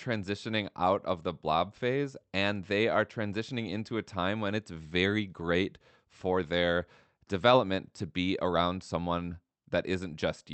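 Speech over a call line; no technical faults heard.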